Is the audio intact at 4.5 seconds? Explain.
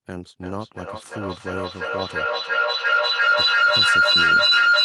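No. A feedback howl runs from 0.4 s to the end: the microphone-to-loudspeaker loop gains level each pass, with a loop delay of roughly 0.3 s, so it swells to a tone around 1.5 kHz, peaking about 14 dB above the speech. A spectrogram shows a bright horizontal line, and the waveform looks swollen.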